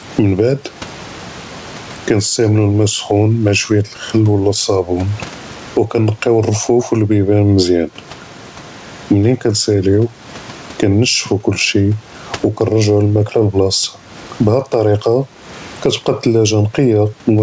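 Throughout the speech, the level breathes in and out: gain pumping, likely caused by input gain set far too high with a fast limiter clamping down on every loud syllable. The gain swings by roughly 15 dB, and the room noise sits about 37 dB below the speech. On a waveform the peaks look flattened to a near-constant height. On a spectrogram there is nothing above 8 kHz, which fits a G.722 call path.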